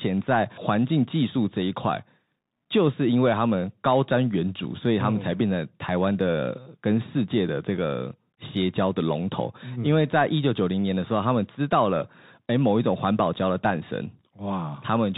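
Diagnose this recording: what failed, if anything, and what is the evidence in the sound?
The failure is at the codec stage: the whole 15-second speech clip has gone through a Bluetooth CVSD headset codec, and the damage is plainly audible. Nothing comes through above 4 kHz, so it's boxy and narrowband. The s sounds turn scratchy, and a grainy hiss sits under everything. CVSD sends one up-or-down bit per sample, consistent with its 64 kbit/s stream, and when loud high content outruns its adaptive step, you get that gritty distortion.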